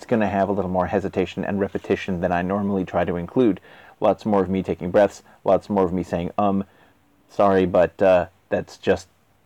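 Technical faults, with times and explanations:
Throughout: hard clipping. The level overdrives a stage by about 4 dB, so peaks exceeding its limit are sliced flat. Only a small fraction of samples, well under one percent, are affected, giving brief crackle and added high harmonics on the loudest moments.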